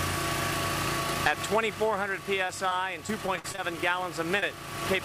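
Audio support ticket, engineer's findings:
Repeated packet loss (robotic sound), 2.47 to 3.78 s. Choppy stretch with pieces missing. Jitter buffer keeps stretching the last sound over recurring gaps up to 49 ms, about 13% of the span.

Short concealed packet loss, 4.40 s. Brief smear lasting about 20 ms. Decoder concealment continued the preceding sound, then blended back into the real signal.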